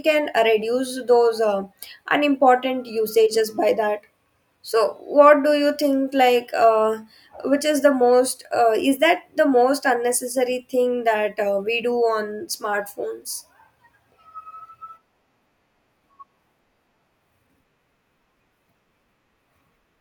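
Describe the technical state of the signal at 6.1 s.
At 6.1 s the speech signal is intact, with no dropout, clipping, distortion or other fault at that moment.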